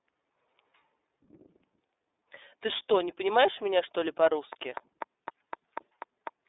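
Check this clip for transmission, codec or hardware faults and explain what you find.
The speech carries one codec fault running through the whole clip. The iLBC codec, from start to finish: the encoder codes each short frame's excitation on its own, without leaning on the previous frame, at a rate that fits its 13.33 kbps mode with 30 ms frames. The sound sits in a telephone band of roughly 300 Hz to 3.7 kHz, with nothing above 3.8 kHz, so it is thin and muffled, and plainly audible coding damage gives it a rough, synthetic edge.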